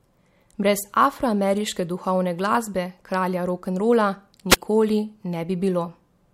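At 4.50 s the speech suffers a wireless microphone squelch dropout lasting to 4.56 s. The analogue FM radio link weakened, and the receiver's squelch gated its output shut, producing a mute of about 3.3 ms. The signal fades as hiss swells, then briefly goes near silent before the speech resumes. That rising noise ahead of the hole marks an analogue radio fade, unlike a digital packet loss, which cuts out abruptly.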